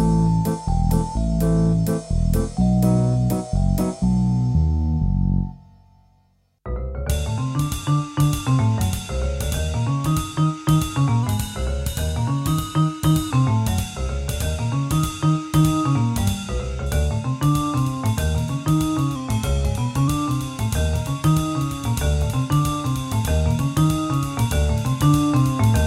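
A clock-matching process likely changed the playback rate in one jump, a drift correction step. From 11.23 to 13.31 s the sound runs 6.23% fast and 105 cents sharp; from 19.16 to 20.08 s, 6.23% slow and 111 cents flat, each snapping back abruptly.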